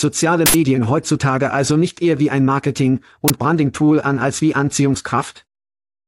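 At 0.46 to 0.54 s, an uninitialised buffer plays. Leftover memory was read out as samples before real audio arrived. It sounds like a loud 80 ms burst of digital noise. A shorter 20 ms burst repeats at 3.28 to 3.30 s.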